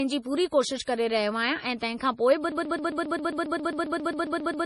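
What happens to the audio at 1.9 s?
At 1.9 s the speech carries a fault that runs through the whole clip: low-bitrate audio saved at a high bitrate. Nothing sounds above about 11.3 kHz, so the top end is dull and airless. The artefacts of the first MP3 encoding are still there. The likely cause is a 32 kbit/s MP3 re-encoded near 190 kbit/s. The second pass adds file size, but it cannot restore detail the first one discarded.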